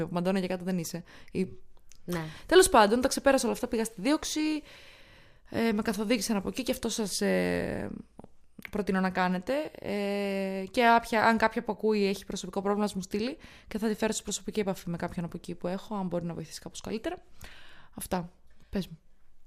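No technical faults were found anywhere in the speech recording.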